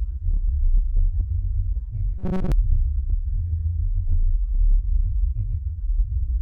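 At 0.49 s there is damaged data in the compressed stream. The decoder misreads a corrupted frame, loses sync and hunts for the next header. A brief glitch results.

From 2.18 to 2.52 s the sound turns into a rigid metallic buzz near 188 Hz. This is robotic sound from repeated short buffers, the likely cause being late audio filled by looping a slice of about 5 ms. Most of that stretch is repeats, and the real sound in between is skipped.

The same stream damage returns at 2.98 s and again at 5.11 s. Each is a short blip as the decoder loses and regains sync.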